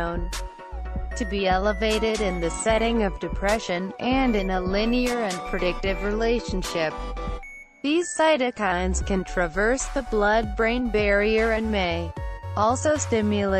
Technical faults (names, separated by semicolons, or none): none